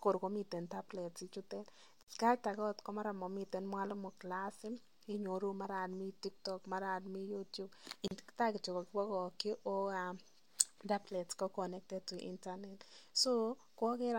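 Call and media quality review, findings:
Gap at a join of encoded pieces, 2.03–2.08 s (50 ms) and 8.08–8.11 s (34 ms), six seconds apart: speech drops to silence with smeared edges, then resumes where it stopped. Separately encoded segments joined untrimmed, with encoder delay and last-frame padding left in.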